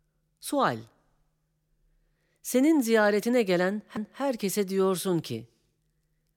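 At 3.97 s, a CD skip: the laser jumped tracks and muted for a few milliseconds, leaving a tick, a sudden jump in the speech, and a thin vertical spectrogram line.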